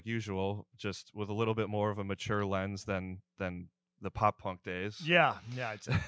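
Nothing stood out on listening to this speech recording; it carries the sound of call microphone processing, with nothing above 8 kHz and the lowest bass trimmed away, which is normal for that path.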